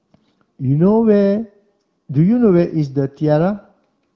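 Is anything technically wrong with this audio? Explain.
No technical faults are present.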